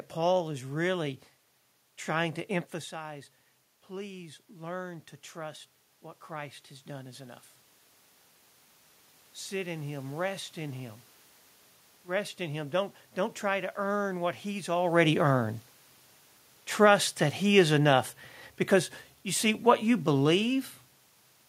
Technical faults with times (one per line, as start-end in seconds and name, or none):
2.90-7.50 automatic gain rising
16.68-20.61 automatic gain falling